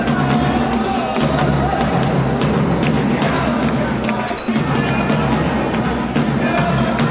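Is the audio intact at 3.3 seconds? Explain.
Yes, the audio is intact at 3.3 seconds, with only the narrowband character of the call path, which carries nothing above about 4 kHz.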